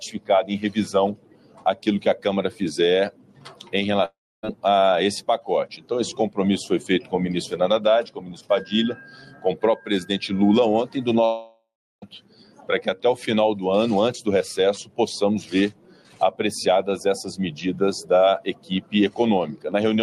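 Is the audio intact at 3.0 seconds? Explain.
Yes, the audio is intact at 3.0 seconds, with no dropout, click, distortion or other fault at that moment.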